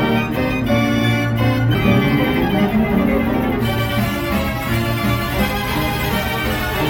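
At 1.74 s, a CD skip: the laser jumped to another turn of the disc's spiral, giving a brief mute of a few milliseconds, a tick, and an abrupt jump in the audio.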